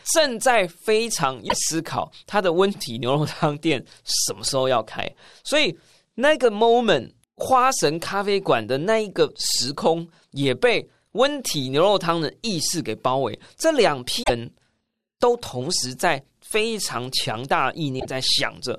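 Damaged data in the compressed stream shows up four times, at 1.45–1.55, 4.46–4.49, 14.20–14.30 and 17.97–18.06 s. Each time the decoder hits corrupted frames, loses sync and hunts for the next header, so the speech breaks into a short chirp, squawk, click or hole.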